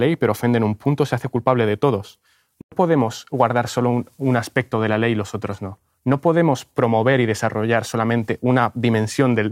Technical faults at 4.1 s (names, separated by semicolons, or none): none